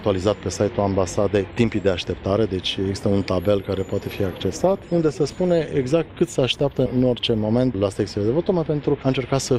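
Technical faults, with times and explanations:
4.38 to 9.58 s, call bitrate drop: From 4.38 s to the end, the sound turns coarser and duller. The call's bandwidth estimate fell, so the encoder had far fewer bits to spend. The quality change fits a fall from about 128 kbps to about 25 kbps. With so few bits, detail is coded roughly and the top frequencies are trimmed away. That gives the muffled, watery texture. It is worst for about 1.1 s.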